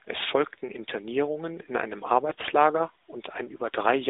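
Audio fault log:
2.30–2.48 s, AMR bit errors: right after "in einem", the sound turns hoarse, scratchy and gargly for about 190 ms, roughly nine 20 ms frames, while pitch and loudness stay about where they were. A heavy share of the codec's weakly protected bits arrived flipped, but the check on its key bits still passed, so the decoder used them. Excitation pulses landed in the wrong positions and the fine pitch, gain and spectral values drifted, roughening the narrowband AMR signal.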